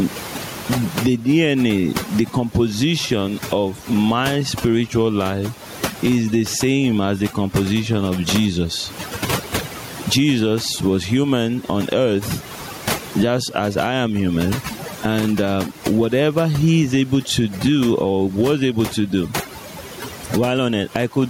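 Overdone noise removal runs through the whole speech clip. Frequency bands that fall near the noise estimate are cut far down or off, taking quiet parts of the voice with them, so pauses sink to near silence with twinkling specks.

Gain pumping is also present throughout, with the level swinging by something like 15 dB. The likely cause is input gain set far too high, with a fast limiter or compressor pulling it down on every peak. Loud and soft passages end up squashed together, and the room noise sits about 32 dB below the speech.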